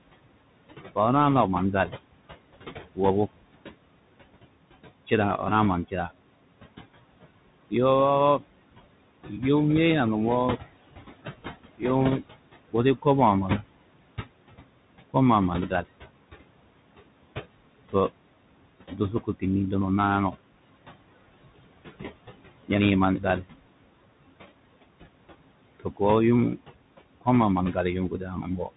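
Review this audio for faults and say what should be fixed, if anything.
Noise suppressor artifacts run the whole way through. The suppressor pulls the room noise down by about 21 dB between phrases, then lets it back up under the speech, so the leftover noise pumps and flutters. Easing the suppression depth or smoothing its release would tame that.

The Bluetooth CVSD headset codec is also on the whole clip, and its damage is plainly audible. Nothing gets through above 3.8 kHz, s sounds turn scratchy, and there's a grainy hiss under the speech, which fits the 64 kbps one-bit delta coding that can't keep up with fast high-frequency swings. Switching the headset to a wideband profile would avoid it.

Speech cut by the noise suppressor shows up seven times: 0.95 to 2.99 s, 5.07 to 6.11 s, 7.7 to 9.43 s, 11.78 to 15.86 s, 17.92 to 20.34 s, 22.64 to 23.44 s, and 25.8 to 28.7 s. Inside each stretch, short bits of speech, from a tenth to half a second in total, get ducked by about 14 to 21 dB and sound swallowed. 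The suppressor is mistaking quiet speech for noise, so a gentler threshold would fix it.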